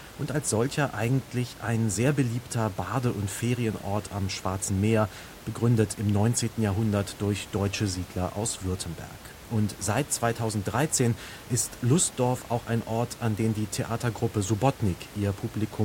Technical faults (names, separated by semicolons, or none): none